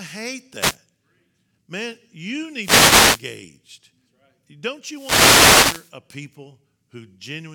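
The wireless microphone's radio link fades as reflections cancel, letting receiver noise through: wireless microphone noise hits swish over the speech at 0.57–0.77 s, 2.59–3.22 s and 4.86–5.96 s.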